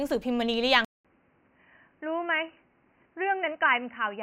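Speech that, at 0.85 s, goes silent for 0.2 s, then returns boxy, cut above 3 kHz, slightly quieter, over faint new background noise: likely an input switched to a poorer device, not a filter.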